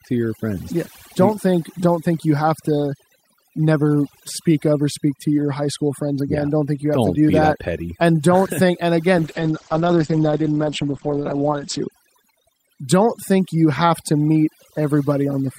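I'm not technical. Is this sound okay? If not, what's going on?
No. Throughout, there's overdone noise removal: the background is pushed down and breaks up into twinkling specks. It stays that way from start to finish.

From 9.19 to 11.97 seconds, there's a call bitrate drop. The connection briefly got worse, so the sound turns rougher and muffled, losing its crisp top end. Unlike the noise removal, it recovers once the connection does.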